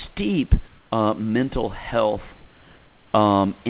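A speech clip carried over a narrowband call path that stops at 4 kHz. Comfort noise in place of the background fills 0.68–0.92 s, before "uh mental health", and 2.36–3.14 s, after it. The room tone turns to steady, featureless hiss about 2 dB quieter, likely from discontinuous transmission, unlike a noise gate, which would leave silence.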